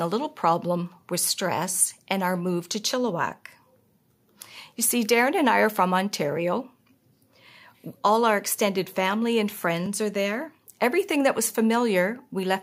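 No technical faults are audible anywhere in the speech recording.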